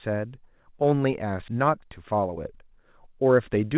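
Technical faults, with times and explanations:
1.48–1.50 s, skip ahead: The receiver threw away a stretch of audio, on the network or when an overfull jitter buffer dropped it, because later audio was already queued. Playback jumps forward with no fill in between, so the sound on either side is butted straight together. Roughly 0.7 s of material is simply absent. The delay drops by about the same amount, and the listener hears an abrupt splice rather than a pause.
1.58–2.36 s and 3.30–3.75 s, jitter buffer speed-up: Both times the buffer held more audio than its target, so the receiver trimmed out short pitch-period-sized pieces over and over to pull the delay back down. It removed a few tens of milliseconds in each stretch, making the speech run at about 109% speed with unchanged pitch. It sounds briefly hurried and clipped in rhythm. The narrowband G.711 mu-law call path, with nothing above 4 kHz, carries it.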